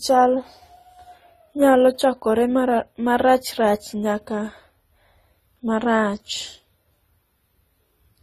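Throughout the speech, nothing is present above 14.1 kHz, and two different flavours of coding artefact sit on top of each other. The likely cause is transcoding between lossy codecs, consistent with a low-bitrate Opus encode re-encoded to AAC-LC, which then spent bits on the earlier artefacts.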